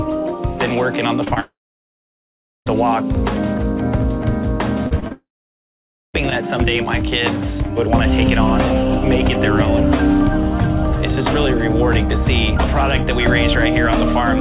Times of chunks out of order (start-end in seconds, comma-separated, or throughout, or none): none